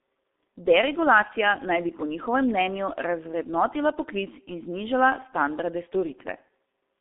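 From start to finish the speech carries heavy G.723.1 codec damage. Nothing gets through above 3.7 kHz, and the band sits around 250 Hz to 3.6 kHz, so it's muffled and hoarse with smeared consonants. That fits the codec's 6.3 kbit/s mode and its slow 30 ms frame updates.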